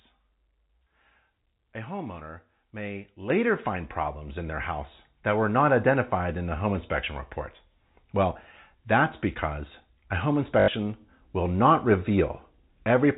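At 3.3 s the microphone volume is stepped up by about 8 dB in one jump, with the call software raising the input gain because it judged the level too low. Speech and background noise get louder together. On a waveform the envelope widens abruptly at that instant.

From 10.6 to 10.68 s there is packet loss with the last packet repeated. About 80 ms of audio is missing, which fits four lost 20 ms packets, and the receiver loops the final good packet to fill the gap. The loops fall out of step with the pitch, producing a short robotic stutter with a buzz near 50 Hz. A spectrogram shows copied blocks, all limited to the band below 4 kHz of the G.711 telephone coding.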